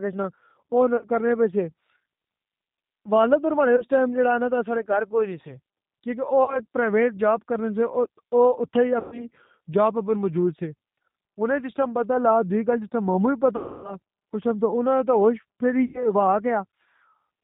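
G.729 coding, heard across the whole recording, reduces the speech to an 8 kbit/s model. The decoder rebuilds each 10 ms frame from a vocal tract filter, a pitch predictor and a few pulses per half-frame, so nothing above 4 kHz survives. The codec damage is plainly audible. The voice sounds band-limited, slightly rough and synthetic. The codec is the lighter G.729A variant.

VoIP packet loss concealed by the speech codec occurs six times: 0.97 to 1.05 s, 3.76 to 3.84 s, 6.44 to 6.61 s, 8.99 to 9.29 s, 13.56 to 13.96 s and 15.86 to 16.12 s. The missing audio spans 40, 20, 40, 120, 280 and 80 ms, which fits lost 20 ms packets. At each gap the decoder stretches its last pitch and filter into a buzzy tone or coloured noise that fades. Because each frame builds on the one before, the voice stays weak or distorted after the audio resumes.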